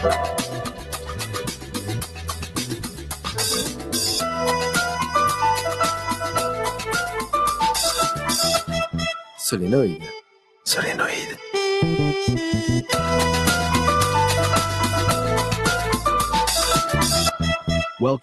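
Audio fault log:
Throughout: noise suppressor applied to music or sounds. A speech-oriented noise suppressor stays active across the clip, and its gain swings by roughly 10 dB. It treats sustained tones, ambience and reverberant decay as noise and pulls them down, while onsets pass mostly intact. The result is a pumping, fluttering level with thinned tails. The Opus call path underneath adds its own coding noise and a top end that stops around 12 kHz.
0.27–3.39 s, 3.63–3.95 s, 5.98–6.36 s, 6.71–6.91 s, 9.19–9.40 s, 10.21–10.65 s: sound cut by the noise suppressor. In these stretches the suppressor misjudges the sound as noise and attenuates it harder than elsewhere, by about 10, 8, 7, 7, 9 and 10 dB respectively. The longest stretch runs about three seconds at the start. Held or decaying material sinks or has its decay clipped short, while transients still punch through, so level drops unevenly rather than as a clean fade.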